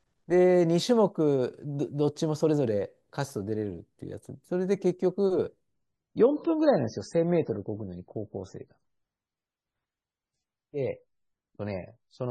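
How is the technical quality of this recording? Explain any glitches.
Quality drops partway through. From 5.74 s to the end, an adaptive stream at a lower bitrate takes over after the connection slowed. The speech suddenly loses everything above 9 kHz and sounds dull, with no gap. That fits a switch from 128 to 16 kbit/s MP3.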